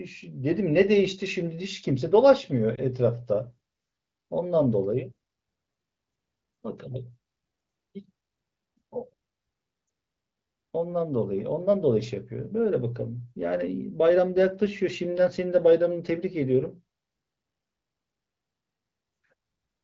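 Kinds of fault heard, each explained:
Lost AMR speech frames: at 2.75 s and 9.87 s, a single 20 ms frame fails its radio checksum. The AMR-WB decoder, running at 15.85 kbit/s, covers each loss by reusing the last good pitch and vocal tract settings at reduced gain. Each is heard as a brief dip or warble in the speech, not a hard silent gap or click as in a plain dropout. Neither is long enough to stretch and fade away.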